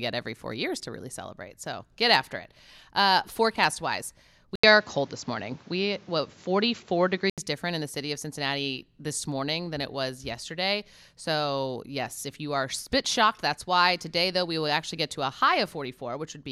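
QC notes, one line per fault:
4.56 to 7.38 s, input switched to a poorer device: after "forecast wise" an 80 ms gap opens and the speech turns duller, with nothing above 7.6 kHz, a few decibels' level shift and a new noise floor, likely another microphone, until "different in the city".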